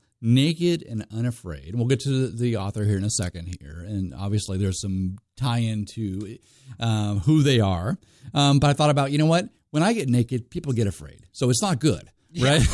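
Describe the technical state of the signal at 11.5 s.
At 11.5 s the speech signal is intact, with no audible technical fault at that moment.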